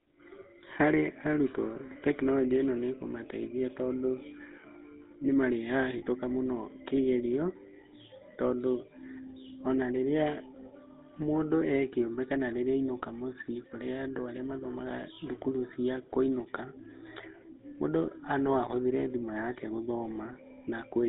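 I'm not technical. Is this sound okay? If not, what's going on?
No. The whole clip passes through the GSM full-rate codec, the old mobile-phone voice coder. It rebuilds speech from a rough model of the voice, which leaves a buzzy, gravelly edge throughout. Sound above about 3.7 kHz is cut off, so the clip sounds dull and phone-like.

There is also a short case of lost GSM frames from 5.98 to 6.03 s, just before "mũno kĩgerio". About 40 ms of signal went missing. The decoder filled the gap by repeating the last good stretch, which produces a brief metallic ring in place of the lost sound.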